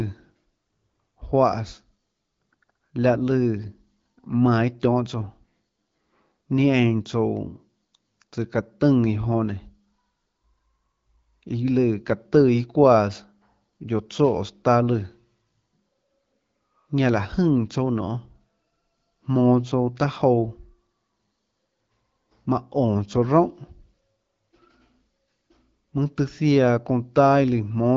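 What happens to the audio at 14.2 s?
Nothing goes wrong at 14.2 s: the speech carries on intact through that moment, with only the light smoothing and the lack of content above about 7.5 kHz that come from its AMR wideband (HD Voice) coding at 12.65 kbit/s.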